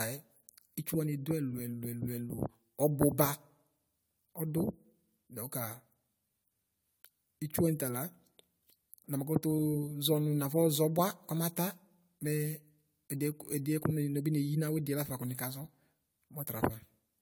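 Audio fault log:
Throughout: generation loss. The speech sounds swirly, smeared and hollow, with blurred consonant onsets and a full band extending to about 20.1 kHz. This likely comes from about five passes through a lossy codec like AAC-LC near 96 kbit/s, each requantising on a shifted frame grid.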